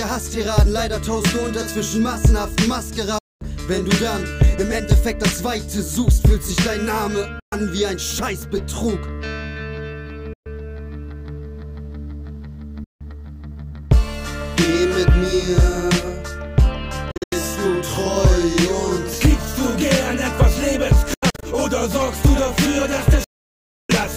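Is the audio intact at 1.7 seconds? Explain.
Yes, at 1.7 seconds the audio is intact, with no dropout, click, distortion or other fault to be heard there.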